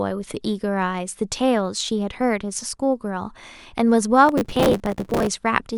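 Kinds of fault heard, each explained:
Processor overload crackle: from 4.27 to 5.27 s, roughly a hundred tiny buffers arrive late and replay stale audio, giving gritty tearing rather than one isolated click.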